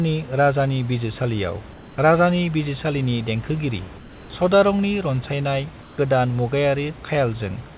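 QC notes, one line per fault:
1.72–1.98 s, 3.98–4.30 s and 5.82–5.98 s, comfort noise in place of the background: in each gap between speech, the real room noise (around 22 dB under the speech) drops out and a flat, textureless hiss takes over for 0.16 to 0.32 s, about 2 to 3 dB quieter, before the speech returns. That's likely the sender's discontinuous transmission going quiet and the receiver filling in synthetic noise. It sits within the call path's narrowband audio, with nothing above 4 kHz.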